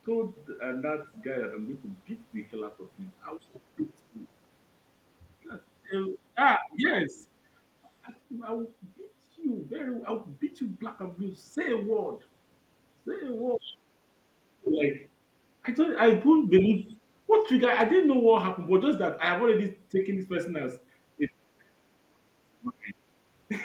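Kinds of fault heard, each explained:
Other side's voice leaking through: a faint second voice, about 25 dB under the talker, appears briefly at 3.41 s, then returns louder at 13.64 to 16.94 s, about 15 dB down, likely the far end's loudspeaker echo that the canceller failed to remove.
Speech suppressed in double talk: the talker's level dips in pieces at 3.76 to 8.09 s, 11.55 to 16.87 s and 21.18 to 23.0 s, falling about 15, 30 and 40 dB, likely an echo canceller turning the talker down along with the loudspeaker echo while both sides talked at once.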